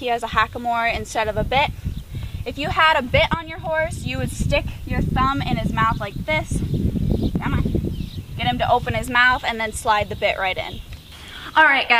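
No technical faults are audible anywhere in the recording.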